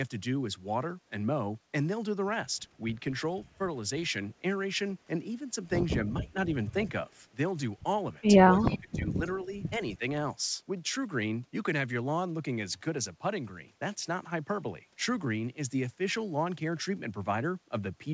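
Speech recorded over a call, with nothing above 8 kHz, which fits a G.722 wideband codec. The speech is suppressed in double talk at 6.2–6.35 s, 8.48–9.25 s, 9.44–9.55 s and 9.97–10.02 s. The voice sinks by about 15 dB, then about 25 dB in the longest dip, and only slightly in the last two. The likely cause is an echo canceller turning everything down while both sides talked. Inside the deep dip, at 8.62–8.77 s, an echo leak appears. A faint copy of the voice returns 254 ms late, well below the direct speech. It is likely loudspeaker pickup that the canceller failed to remove.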